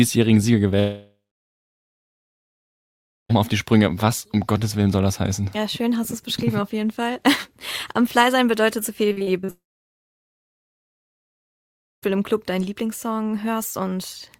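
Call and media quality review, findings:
Long network dropout, 0.79–3.31 s: stream likely stopped arriving; receiver extends last sound briefly, then about 2.1 s of near silence before audio resumes with the missing section gone.

Repeated packet loss (robotic sound), 9.09–9.50 s: six successive gaps, longest 42 ms, each patched by concealment; about 41% of the span is filled in, giving choppy audio with pieces missing.

Long network dropout, 9.50–12.04 s: follows directly on the packet loss; short concealment tail, then about 2.4 s of near silence; audio returns without the lost 2.5 s.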